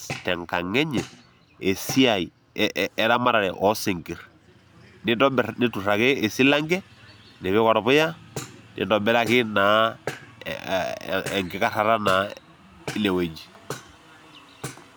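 No technical faults can be heard anywhere in the recording.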